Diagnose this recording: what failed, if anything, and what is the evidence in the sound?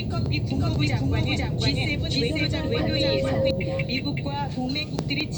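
From 0.51 s to 3.51 s every sound is heard twice. A second full-band copy, about as loud as the first, trails by roughly half a second, with no decay or room colour, and it begins and ends abruptly. This doubled audio track most likely comes from a slower second capture path or an edit holding two offset copies.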